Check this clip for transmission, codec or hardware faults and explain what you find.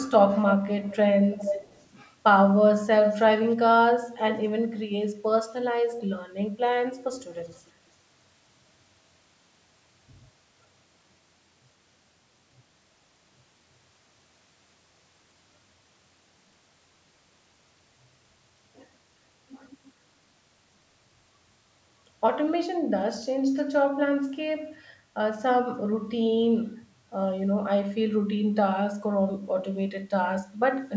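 An echo leak is audible: a delayed copy of the speech returns about 0.33 s late at 0.89–0.97, 1.32–1.89, 3.01–3.56, 5.99–6.04 and 7.52–7.69 s. It is nearly as loud as the speech at 1.32 and 3.01 s and faint elsewhere. The likely cause is a loudspeaker echo canceller letting its microphone pickup through. On a spectrogram, the speech's harmonic patterns repeat, shifted right by a third of a second. The waveform shows smaller trailing copies of the speech bursts.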